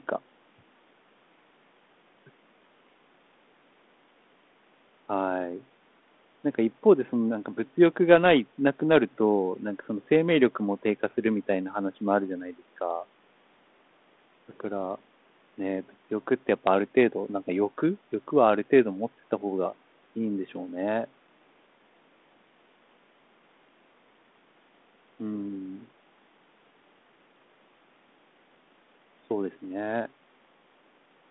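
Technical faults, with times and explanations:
No technical faults can be heard in the speech. The speech sits within a telephone band of about 200 Hz to 3.6 kHz, which fits G.726 ADPCM at 32 kbit/s with only light coding grain, and the call microphone processing has trimmed the lowest bass.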